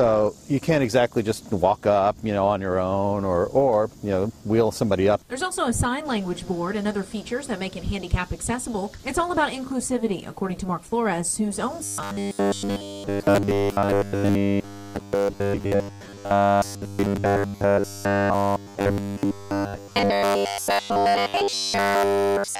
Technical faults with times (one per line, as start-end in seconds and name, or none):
11.84-22.59 robotic sound from repeated short buffers